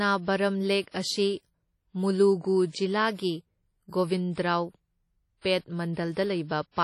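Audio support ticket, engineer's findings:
Likely WMA compression throughout the speech, heavily quantised, consistent with a low bitrate around 32 kbps. Long transform blocks smear quantisation noise over tens of milliseconds: ringing, washy texture, hiss breathing with the signal, weak components dropped, nothing above 15.3 kHz.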